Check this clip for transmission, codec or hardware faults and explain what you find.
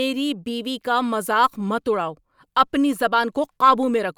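Nothing stood out on listening to this speech clip.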